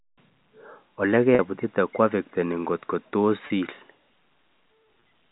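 You'll hear packet loss with pitch repetition three times: at 1.35 to 1.39 s (40 ms), 3.47 to 3.50 s (30 ms) and 5.00 to 5.02 s (20 ms). Chunks of the stream went missing, and the receiver bridged each hole by looping the last pitch cycle. So instead of a gap you get a brief held, slightly buzzy tone. The hole sizes fit 10 ms packets dropping in runs, all over the G.711 phone-band signal.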